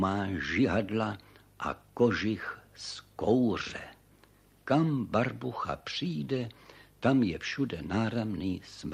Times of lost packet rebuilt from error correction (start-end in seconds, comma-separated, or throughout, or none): none